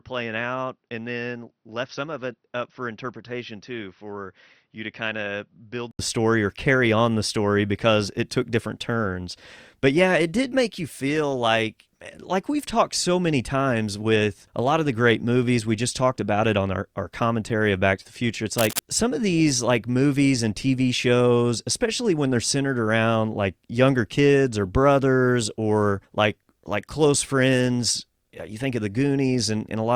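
From 0.0 to 5.99 s the speech sounds dull and about 10 dB quieter, likely because the input switched to a poorer device. A spectrogram shows nothing above 6 kHz, then full bandwidth after an 80 ms gap before "story or carry on".

Between "to the future it's" and "some of these like", at 18.58 to 18.79 s, rough scratching rides over the speech. This is likely cable scratch noise, appearing as dense, irregular broadband bursts roughly 5 dB below the speech.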